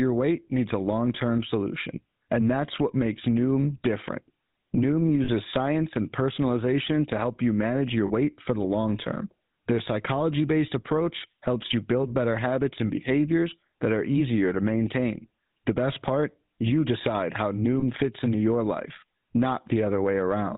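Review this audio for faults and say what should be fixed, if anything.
The GSM full-rate codec runs throughout. The vocal-tract model and pulse excitation give a plainly audible buzzy, gravelly roughness. Nothing passes above 4 kHz. Use a wideband codec, or record the source before it reaches the GSM link.

Lost GSM frames occur at 5.24 s, 8.06 s and 17.80 s. The first is just before "science and personalization to" and lasts 40 ms. The second falls between "help you manage your" and "for the long term" and also lasts 40 ms. The third falls between "part you decide how" and "fits into your life" and lasts 20 ms. Each gap is bridged by repeating the last good frame, so a rough, metallic ring is held briefly. Reduce transmission errors on the radio or network path, or add error protection, so frames arrive intact.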